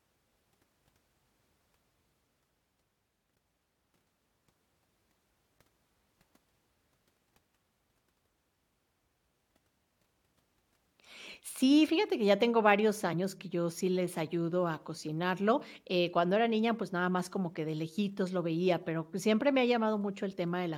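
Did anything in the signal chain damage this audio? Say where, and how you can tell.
Yes. Short glitches at 13.12 s, after "que ya tengo varios", and at 15.61 s, after "les ayudo a cocinarlo", point to damaged data in the compressed stream: corrupted frames break the decoder's sync.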